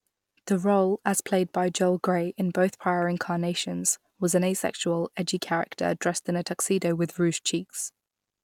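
Nothing in the recording stood out as a technical problem on listening.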